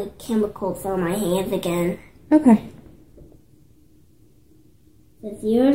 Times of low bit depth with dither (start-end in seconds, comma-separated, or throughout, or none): none